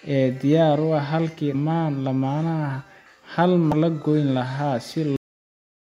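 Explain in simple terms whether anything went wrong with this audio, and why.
Yes, two things went wrong in this speech recording.

The first is damaged data in a compressed stream, heard as two very brief blips at about 1.53 s and 3.72 s. A small piece of the stored file was corrupted, so the player misread that spot and had to find its place again. It comes from the player decoding bad data, not just reproducing a bump in the signal.

The second is a cut-off end. At 5.16 s the speech stops dead, partway through a sound, and the last fraction of a second is complete silence. The final stretch of audio was never saved or played out. A natural ending, or even a quick fade, would trail off with some decay or room sound, but here the sound simply vanishes in an instant.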